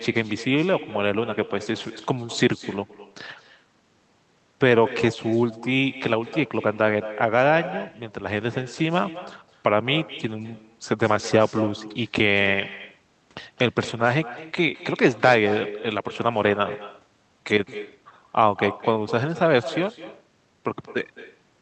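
Speech runs through the whole clip with an echo with no canceller. Every phrase returns roughly a fifth of a second later as a quieter, thinner copy, about 14 dB below the direct voice. That points to a far-end loudspeaker feeding its own microphone, with nothing subtracting the played-back signal before it travels back across the network. The round-trip delay sets the lag, and the loudspeaker, room and microphone strip the body from the copy.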